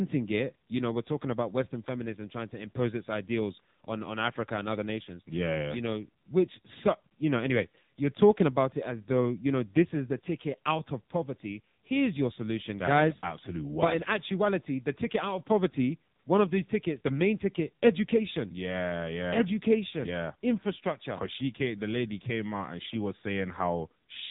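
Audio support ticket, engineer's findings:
AMR narrowband mobile codec, whole clip: no content above 3.8 kHz, speech thin and buzzy with a synthetic edge. Consistent with AMR-NB around 6.7 kbps; the heavy coding damage comes from a few pulses per subframe driving a vocal-tract model in 20 ms frames.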